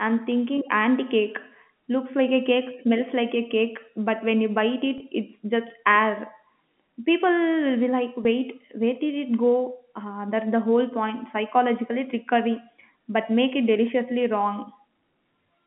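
At 4.98 to 5.00 s and at 8.24 s the speech holds on a buzzy tone: packet loss with pitch repetition, the last pitch period looped across 20 ms and then 10 ms of lost audio. Unlike a plain dropout, no silent gap or click appears.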